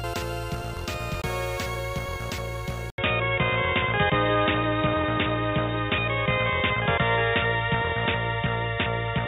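At 2.90 s the sound cuts out for 80 ms. It returns dull and boxy, with nothing above 3.8 kHz, until the end. The level shifts by about 5 dB. A faint new background noise appears. The input likely switched to a poorer device.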